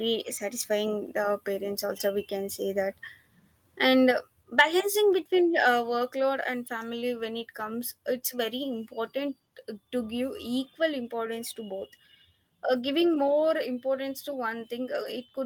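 At 4.11 s the whole signal, speech and background alike, drops suddenly by about 4 dB in a single step, with no fade. A sudden level change like this is likely a microphone volume step-down, where the call software judges the input too hot and lowers the device's capture volume all at once. The drop comes before any distorted peak.

Half a second later, from 4.59 to 4.62 s, just after "and uh", a peak turns briefly harsh and crackly. That edge is likely microphone overload. The signal is about 2 dB past the converter's ceiling, so the tops of the waveform are flattened for a small share of samples in that short stretch.

At 13.29 s, between "uh giving" and "importance to", the level steps down again by about 2 dB. This is likely a second microphone volume step-down, smaller but just as abrupt.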